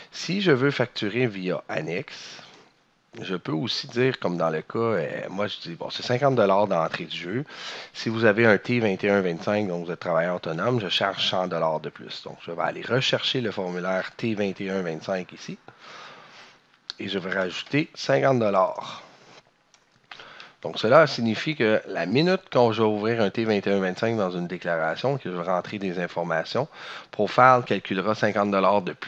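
Dropped samples at 26.22 s produce a single sharp click in the audio. The waveform jumps abruptly, likely because roughly one sample, a few hundredths of a millisecond, went missing from the stream. The gap is far too brief to remove any audible sound.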